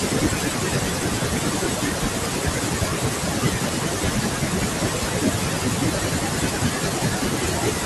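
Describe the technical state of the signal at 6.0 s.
At 6.0 s, noise suppressor artifacts are present: frame-by-frame gain in bands judged as steady noise makes the background sink between the words and rise under them. Speech cut by the noise suppressor runs across this point, spanning 0.0 to 7.85 s. The suppressor mistakes low-level speech energy for noise, pulling soft consonants and word endings down by up to about 18 dB, so they sound swallowed, while room noise sits about 18 dB below the speech.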